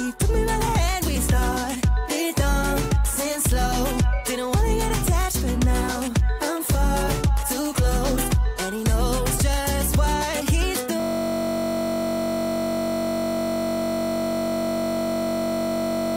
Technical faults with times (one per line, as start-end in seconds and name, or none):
11.00-16.16 system hang loop